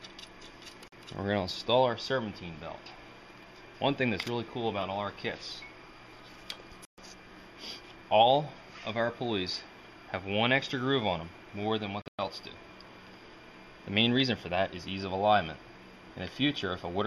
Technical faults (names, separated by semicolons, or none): Bluetooth dropout